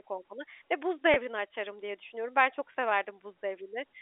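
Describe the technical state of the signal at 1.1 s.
A brief packet loss with pitch repetition occurs from 1.14 to 1.16 s, just before "açarım diye düşünüyorum". About 20 ms of audio went missing, which fits a single lost packet. The receiver filled the gap by repeating the last pitch period. Because the gap is so short, it never fades to silence. It sounds like a slightly held, buzzy moment. The speech then resumes, still carrying the narrow telephone band of G.711 coding.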